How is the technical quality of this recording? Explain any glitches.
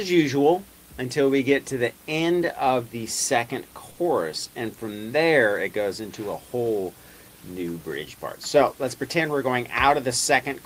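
There is one glitch: a burst of packet loss from 3.91 to 4.00 s. Several packets in a row never arrived in time, so the receiver stretched the last received sound across about 60 ms, fading it into a flat buzz or hiss, then resumed with about 60 ms of audio skipped. A spectrogram shows smeared, static harmonics that dim, then an abrupt jump; the waveform shows a repetitive, decaying stretch ending at a discontinuity.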